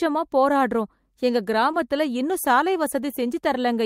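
At 1.71 to 1.75 s the speech shows short concealed packet loss. About 20 ms of audio never arrived at the decoder in time, which fits a single lost packet. The receiver bridged the gap with 20 ms of synthesised fill, extending the preceding sound rather than leaving silence, then crossfaded back into the real signal. The result is a brief smear across that spot in the speech instead of a clean gap or click.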